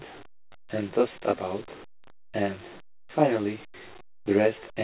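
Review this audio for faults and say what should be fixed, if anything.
Channel delay (comb filtering) runs through the whole speech clip. One channel trails the other by around 20 ms, and summing them to mono cancels shared content at evenly spaced frequencies. The first notch sits near 30 Hz and further notches repeat roughly every 50 Hz, giving a rough, slightly doubled sound. Unlike room reverb, there is no decaying tail, and unlike the call path's dullness, which is a clean cutoff with nothing above 4 kHz, the notches are fixed and fall inside the band. Prevent it by time-aligning the channels before any mono downmix, or by sending only one channel.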